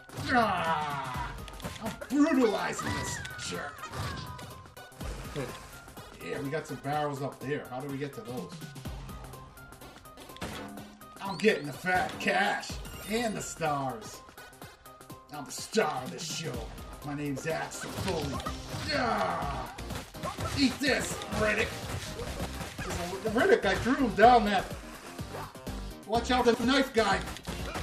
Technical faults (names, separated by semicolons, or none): frames out of order